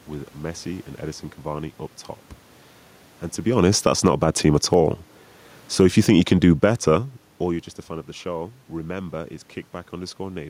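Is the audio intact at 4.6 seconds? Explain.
No. Just after "to be honest that's", an automatic gain rise ran from 4.07 to 4.59 s: the gain control judged the input too quiet and lifted its gain by about 4 dB. By 4.6 s voice and background have swelled together to that higher level.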